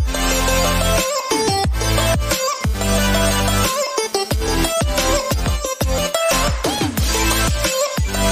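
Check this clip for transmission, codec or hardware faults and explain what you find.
There is one fault: GSM phone buzz from 2.61 to 5.34 s. A nearby 2G phone pulses at about 217 Hz, and the audio circuit rectifies those radio bursts. The result is a harsh, raspy buzz, rich in harmonics, about 19 dB below the signal. It comes and goes, which fits a data transfer.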